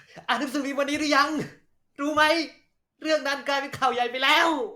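Nothing in the speech stood out as a technical problem on listening.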